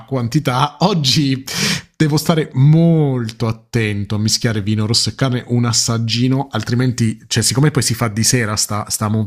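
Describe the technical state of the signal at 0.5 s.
At 0.5 s the speech signal is intact, with no dropout, distortion, clipping or other audible technical fault at that moment.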